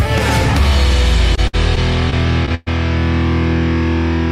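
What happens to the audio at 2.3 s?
At 2.3 s you're in the middle of a burst of repeated packet loss (robotic sound) running from about 1.35 to 2.68 s. Seven gaps land in that stretch, each patched by stretching out the last bit of sound. The longest is about 118 ms, so it comes across choppy, with chunks missing.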